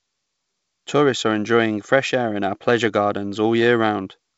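No technical faults can be heard anywhere in the clip. The speech comes through a WebRTC call path that is working normally, and nothing is heard above about 8 kHz, which fits the G.722 wideband codec.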